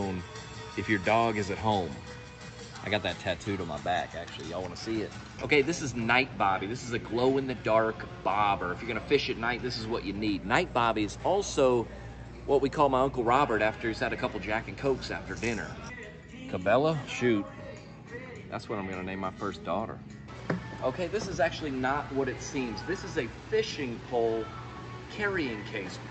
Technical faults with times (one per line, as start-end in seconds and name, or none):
none